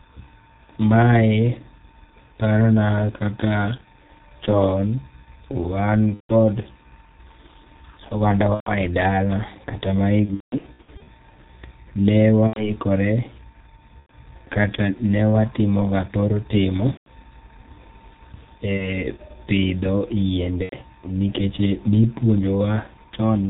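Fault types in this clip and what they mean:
G.723.1 codec: a low-rate telephony codec at about 6.3 kbit/s, heard throughout as muffled, hoarse sound with nothing above 4 kHz, steady rather than intermittent.
VoIP packet loss concealed by the speech codec: eight spots where sound is stretched into a fading buzzy tone or coloured noise that mutes once three or more frames in a row are lost, the worst scattered across 10.25–11.10 s.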